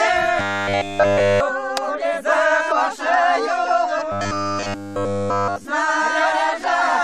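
From 0.4 to 1.4 s and again from 4.12 to 5.65 s, the sound turns into a rigid metallic buzz pitched at 100 Hz. This is robotic sound from repeated short buffers, likely caused by late audio being covered by looping a 10 ms slice while nearly all fresh material is skipped.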